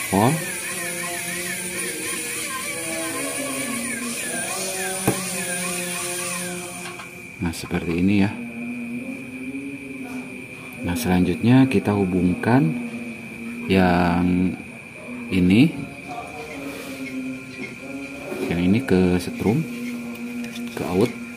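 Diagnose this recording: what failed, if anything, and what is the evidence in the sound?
A buffer underrun at the driver or buffer stage likely left one short block of output unfilled, producing a block of digital silence at 17.69 s. The sound drops out for about 1.5 ms, 64 samples, and resumes with no fade, so it is heard as a tick or dip.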